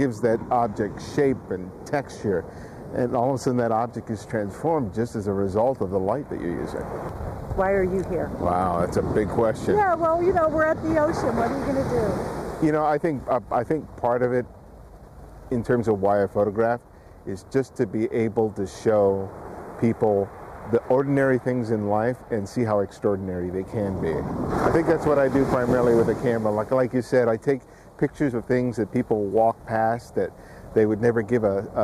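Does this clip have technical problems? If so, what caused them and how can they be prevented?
No, no technical faults heard.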